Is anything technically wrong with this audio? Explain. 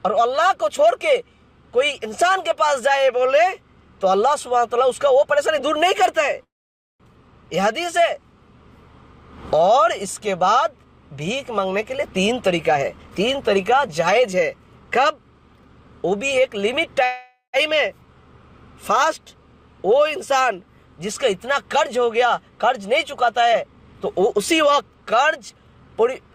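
Yes. There are two call audio freezes and two jitter buffer speed-ups.

The call audio freezes are at 6.43–7.03 s and 17.05–17.56 s. The sound stalls, then resumes where it left off, with nothing lost. This is likely because packets were delayed and the jitter buffer ran dry. The first stall is a 0.56 s gap, mostly silent. The second is 0.48 s, mostly a fading buzz. Unlike a dropout, no audio goes missing.

The jitter buffer speed-ups are at 11.96–15.25 s (117%) and 23.50–25.81 s (121%). Each trims about half a second of pitch periods to cut the delay. The audio sounds hurried, but unlike a pitch shift it keeps the same pitch.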